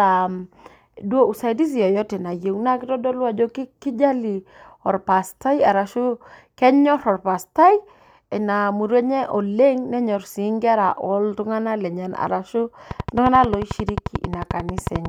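From 12.91 s to 15.06 s a train of clicks runs over the speech, about 30 near-identical pulses at a regular 11.2 per second, peaking roughly 10 dB above the signal. It sounds like steady ticking, most likely interference from nearby equipment or a faulty connection or power supply.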